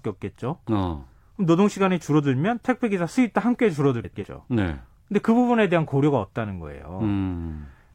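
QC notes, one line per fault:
4.04–4.25 s, frames out of order: two adjacent blocks of about 93 ms each play in swapped order, so this stretch of speech comes out as a garbled flutter; no time is lost, which fits reordered rather than dropped frames.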